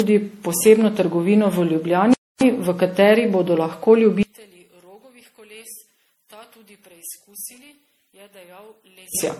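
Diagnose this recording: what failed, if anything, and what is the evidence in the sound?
Generation loss at the codec stage runs through the whole recording. The speech has a swirling, hollow quality with smeared consonant attacks and holes in the upper spectrum, far worse than a single 64 kbit/s MP3 pass would leave. That excess points to repeated re-encoding, likely around seven generations. Each pass quantises on a shifted frame grid, so the damage compounds. A single low-bitrate encode would sound dull and band-limited, not this swirly.

A playback stall, a driver or buffer fault, silences the speech from 2.14 to 2.41 s, a gap of about 0.28 s. The speech stops mid-flow and then resumes. The silence is clean rather than filled with noise or a repeat. The likely cause is the player starving for data or its thread being blocked until it recovered.

One channel inverted shows in the wiring or mixing stage from 4.23 to 9.15 s. 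When the stereo is summed to mono, the centred speech collapses by about 28 dB, leaving only a faint residue of the channel difference. The drop does not come with muffling or band-limiting, and the audio does not stop. Instead, whatever both channels share cancels. That pattern separates a polarity flip, likely in one leg of the path, from a level or connection fault.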